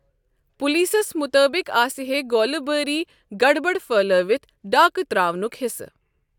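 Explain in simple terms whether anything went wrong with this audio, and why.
Nothing went wrong here: the speech recording shows no audible technical fault anywhere along its length.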